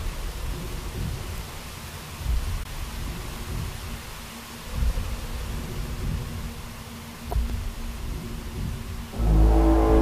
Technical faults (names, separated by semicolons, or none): audio missing between chunks; damaged data in a compressed stream